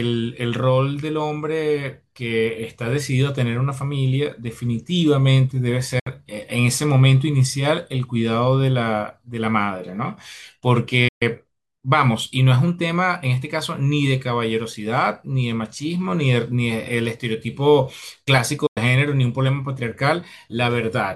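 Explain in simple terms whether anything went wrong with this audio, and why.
Three times the speech suddenly vanishes into a short silence and then carries on: at 5.99 to 6.07 s, 11.08 to 11.22 s, and 18.66 to 18.78 s. Each silence begins and ends with a very quick fade of about 8 ms. This is a digital broadcast dropout. The receiver lost a few chunks of the incoming signal, a handful of frames judging by the lengths, and muted until clean data returned. Whatever was said during those gaps is gone.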